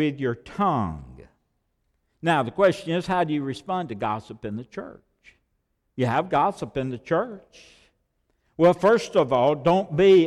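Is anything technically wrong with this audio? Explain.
No, nothing in this speech recording points to a technical fault.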